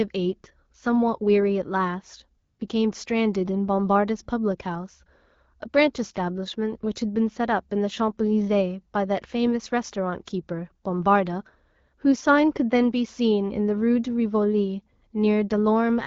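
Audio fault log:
2.43–2.59 s, AMR comfort noise: for about 160 ms the sending phone treated the talker as silent and stopped transmitting speech frames. The receiver filled the gap with synthetic noise built from a rough level and spectral-shape estimate, so the real background is swapped for a smooth, steady hiss that switches in and out abruptly. On a spectrogram the patch shows as a uniform, featureless band with sharp vertical edges. The waveform shows a flat, even noise floor. The audio around it carries the light coloration of a 12.65 kbit/s AMR-WB wideband link.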